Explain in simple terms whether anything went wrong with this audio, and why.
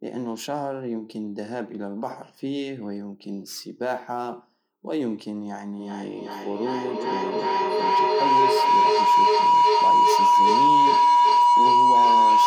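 Something definitely went wrong from about 5.79 s right to the end: a feedback howl. Two devices in the same room were apparently on the call, so the sound kept looping from speaker to microphone and back, getting louder each time instead of dying away. It narrows into a whistle around 1 kHz, pulsing roughly every 0.4 s, and it ends up louder than the speech itself because nothing breaks the loop.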